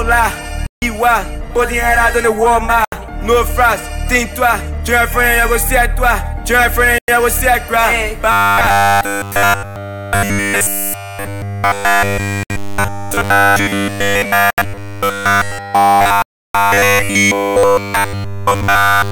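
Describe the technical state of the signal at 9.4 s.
Robotic sound from repeated short buffers runs from 8.32 s to the end at 19.11 s, covering the moment at 9.4 s. The likely cause is audio arriving too seldom, so a 10 ms slice repeats while real material is skipped, imposing a rigid, metallic 100 Hz buzz on the sound.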